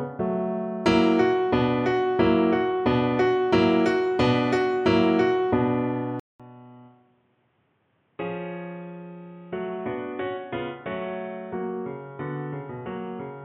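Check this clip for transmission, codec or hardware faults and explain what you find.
One fault is present. From 6.20 s to the end, after a 200 ms silence, the input likely switched to a poorer device. The sound turns dull and boxy, with nothing above 3.8 kHz, a drop of roughly 10 dB and new background noise. The changed level and noise, not just lost treble, set it apart from a codec bandwidth drop.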